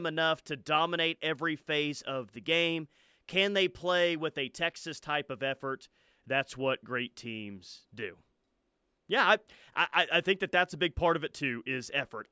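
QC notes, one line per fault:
Nothing stood out on listening to this speech clip.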